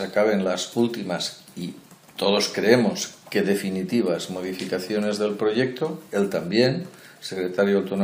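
No technical faults can be heard anywhere in the audio; the signal stays continuous and steady throughout, with no interruptions, level jumps or added noise.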